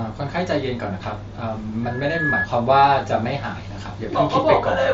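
At 1.83 s a loudspeaker feedback squeal kicks in. The mic is catching its own speaker, and at 1.7 kHz the loop gain tops one, so a single tone swells over under half a second to roughly speech level before stopping at 2.49 s.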